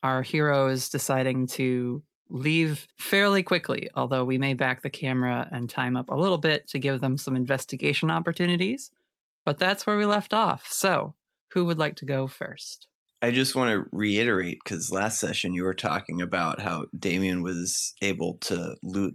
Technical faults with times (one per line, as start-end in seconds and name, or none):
none